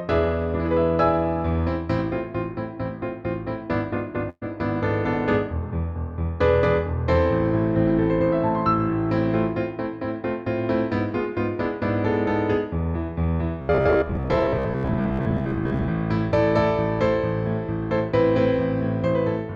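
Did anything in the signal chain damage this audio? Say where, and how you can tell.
Yes. At the network stage, a burst of packet loss hit from 4.29 to 4.43 s. About 120 ms of audio never arrived, and the receiver covered it by stretching the last sound and fading it, ending in roughly 20 ms of silence before the audio resumes further on.

From 13.62 to 15.89 s, the driver or buffer stage was likely starved and kept replaying its last 15 ms buffer. That is robotic sound from repeated short buffers, with roughly half the audio repeated. The loop sets a rigid 66.7 Hz metallic buzz over the sound.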